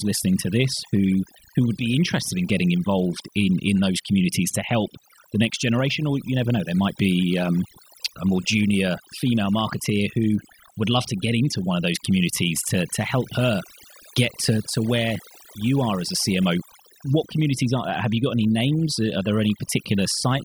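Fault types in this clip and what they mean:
overdone noise removal: throughout the speech, a noise reduction stage set too aggressively cuts individual frequency bands whenever they sit near its noise estimate, taking quiet parts of the voice with them, so the background drops and breaks up into twinkling specks.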